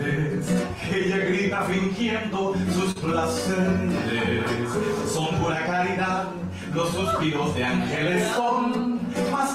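At 2.91 s to 2.98 s there is a short concealed packet loss. About 40 ms of audio failed to arrive at the decoder in time, and the receiver synthesised roughly 38 ms to cover the gap by extending the preceding sound, then crossfaded back into the real signal. The patch is audible as a brief smear or wobble in the sound, ending where the genuine audio resumes.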